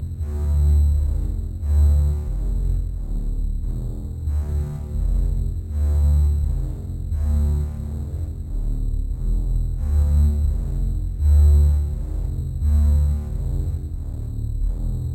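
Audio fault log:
throughout, imaging from sample-and-hold upsampling: samples held without smoothing, fitting an 8 kHz source raised to 48 kHz, leave mirrored copies from 4 kHz upward, about 36 dB down, heard as a faint metallic fizz tracking the sound.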